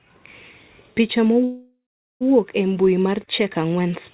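At 1.44 s the speech stalls in a call audio freeze: the last sound smears into a fading buzz, then about 0.42 s of silence, resuming at 2.23 s with nothing lost, likely from delayed packets draining the jitter buffer. A spectrogram shows a flat smear then a blank gap, all below the 4 kHz ceiling.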